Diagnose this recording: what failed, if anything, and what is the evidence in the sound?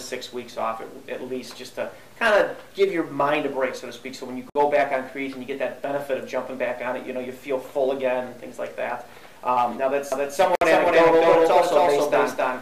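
Two gaps at a join of encoded pieces show up, one at 4.50 s lasting 56 ms and one at 10.55 s lasting 60 ms, six seconds apart. The sound drops out with smeared edges and picks up where it left off. That's the codec stage: separately encoded chunks spliced without trimming encoder delay and padding.

From 10.12 s to the end there's a doubled audio track: a second full-band copy, about as loud as the original, trailing by roughly 300 ms with no reverb tail, and it kicks in abruptly. Likely an edit or second, slower capture path layering two copies out of step.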